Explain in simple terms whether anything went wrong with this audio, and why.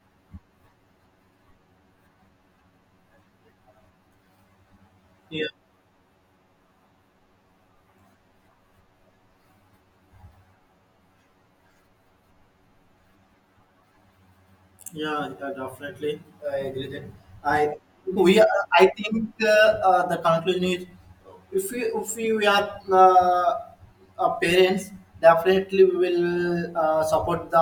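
Something's off the whole way through: a channel delay, causing comb filtering. One side of the speech arrives roughly ten milliseconds late, and when both sides are mixed, certain frequencies cancel at evenly spaced steps from around 50 Hz up, leaving everything hollow and phasey.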